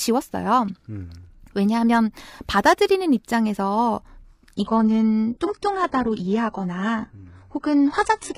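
From 4.56 s to the end, the speech abruptly turns dull and synthetic with nothing above 11 kHz: an adaptive stream at a lower bitrate, pointing to a drop to about 12 kbit/s.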